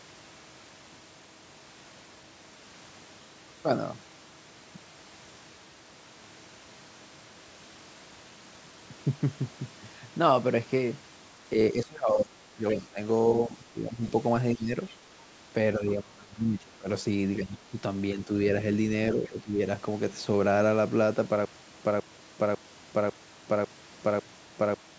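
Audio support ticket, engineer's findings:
Speech suppressed in double talk at 11.72–14.75, 15.78–18.3 and 19.15–19.6 s: talker dips about 20 dB (about 15 dB in the last one), likely the echo canceller ducking both sides while the far end talks.

Other side's voice leaking through, brief faint scraps at 12.70–12.74 and 19.25–19.29 s, about 20 and 30 dB under the talker, likely residual loudspeaker echo the canceller missed.

Stutter with silent gaps from 21.45 s to the end: a 163 ms burst repeats six times every 549 ms with 385 ms of digital silence between. That's likely a stalled stream replaying its last fragment, and the audio in between is lost.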